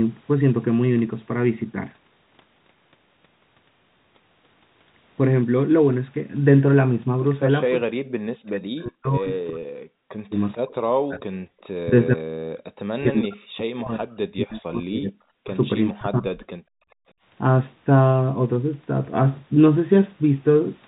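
From 7.78 to 11.23 s the speech keeps sinking and breaking up, dropping by around 40 dB at its worst, for roughly three seconds in total. That's speech suppressed in double talk, most likely. Both ends were talking at once, and the echo canceller couldn't tell the local talker from the loudspeaker's echo, so it pulled everything down. It happens again from 11.84 to 15.58 s, for about three seconds, and briefly from 15.92 to 16.52 s, for well under a second, with the same deep dips.

Scattered through those stretches are faint ghosts of the speech arriving 434 ms late, at 10.52, 11.63 and 15.88 s, each lasting only about 50 ms. They sit around 30 to 35 dB below the main level, so you have to listen for them. This is likely echo leak: the far end's canceller let some of its loudspeaker playback through its microphone, and that residue came back down the line.

At 11.51 s the room tone itself ducks for about 50 ms, dropping by about 29 dB before it comes back. 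That's the background gated by the echo canceller. While the loudspeaker was active, the canceller clamped the microphone hard for a moment and then let go. It's short, but you hear it as a tiny hole in the noise floor. The whole clip tops out around 4 kHz, which fits a narrowband G.711 call path.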